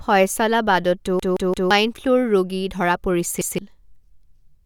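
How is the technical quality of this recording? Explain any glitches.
The recording is marred by two repeated buffer glitches in this speech clip. From 1.20 to 1.71 s a 0.17 s chunk, which fits an 8192-sample buffer, replays three extra times, swallowing about half a second. From 3.41 to 3.58 s it replays once, losing roughly 0.15 s. Each time the device received no new audio in time and replayed its last buffer, so you hear a stutter with hard joins, not the silence a dropout leaves.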